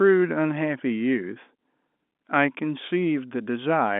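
No faults are present in the speech; the narrow line band of 200 Hz to 3.6 kHz, with nothing above 3.8 kHz, is simply the working telephone path, which fits G.711 mu-law coding at 64 kbps.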